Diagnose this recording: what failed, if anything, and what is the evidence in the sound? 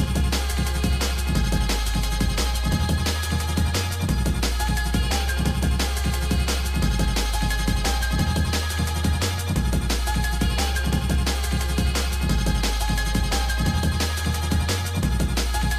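Nothing stood out on listening that would point to a failure at any stage of the chain.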